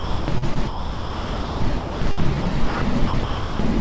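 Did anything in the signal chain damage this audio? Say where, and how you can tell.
Yes. At the call-processing stage there is sound chopped by the voice detector from 0.00 to 2.81 s and again from 3.07 to 3.59 s, likely from the sender's voice detection. About 1.7 s and 0.42 s of real signal give way to smooth comfort noise. On a waveform this shows as flat, even-level patches. On a spectrogram the texture goes uniform and hiss-like below the G.722 path's 8 kHz ceiling.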